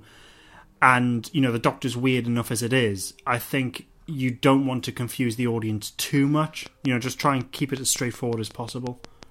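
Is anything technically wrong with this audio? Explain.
Yes. From 6.66 s to 9.24 s there is a train of clicks. About fifteen near-identical pulses arrive at a steady 5.46 per second, peaking roughly 10 dB above the speech. The likely cause is interference or a faulty connection or power supply. It sounds like regular ticking.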